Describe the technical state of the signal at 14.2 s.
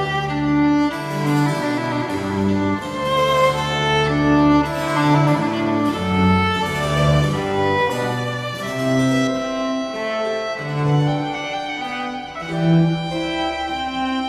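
Dull and muffled: from 9.27 s to the end, de-emphasis applied wrongly slopes the treble down, leaving 10 kHz about 13 dB below 1 kHz.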